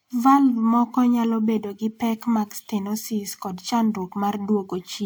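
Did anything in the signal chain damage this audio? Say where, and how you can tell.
No, nothing along the chain seems to have left a mark on this speech recording that I can hear.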